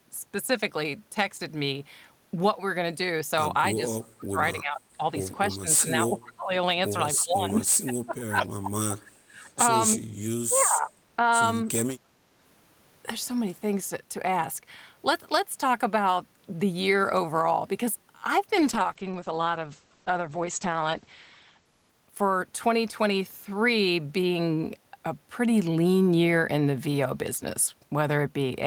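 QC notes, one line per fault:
3.76–5.02 s, 5.48–6.55 s, 7.17–9.46 s, 10.48–11.22 s, speech suppressed in double talk: the level dips by up to about 25, 20, 25 and 10 dB respectively. This is likely an echo canceller attenuating the near talker while the far side also spoke.
4.02–4.06 s and 10.56–10.61 s, echo leak: brief scraps of a delayed copy of the speech, lagging by 294 ms and sitting about 35 and 30 dB below the speech. This is likely residual loudspeaker pickup that the far-end echo canceller failed to remove.
18.56–22.73 s, call bitrate drop: the encoder rate falls from 32 to 10 kbps and stays at its lowest for 2.85 s. Audio bandwidth shrinks from 20 kHz to 8 kHz, so the sound turns muffled and coarsely coded until the rate recovers.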